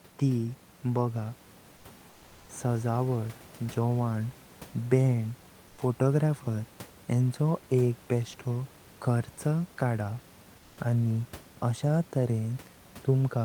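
A speech clip with comfort noise in place of the background in three pauses: 1.76 to 1.84 s, 2.10 to 2.49 s, and 5.68 to 5.78 s, just before "फोटोग्राफर हेंचो एक बेस्टो". The gaps last 80, 390 and 100 ms. In each, the real room noise, about 26 dB below the speech, gives way to a smooth, featureless hiss about 2 to 3 dB quieter. This is likely discontinuous transmission, such as Opus DTX, where the receiver synthesises filler noise while the sender is idle.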